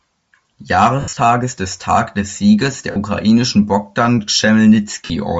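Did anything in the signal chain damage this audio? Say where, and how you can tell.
Yes. At the codec stage, the whole clip carries plainly audible Bluetooth LC3 compression, likely from a low-rate LE Audio link. The upper spectrum is thinned and refilled with noise in 10 ms transform frames, giving the speech a breathy, grainy edge consistent with roughly 32 kbps.

At the wireless transport stage, lost LE Audio frames break up the speech at 1.01 to 1.17 s (about 140 ms missing in scattered gaps, the longest around 70 ms), 2.91 to 2.96 s and 5.05 to 5.10 s. The decoder conceals each gap by repeating the last spectrum with random signs, so the speech smears into noise.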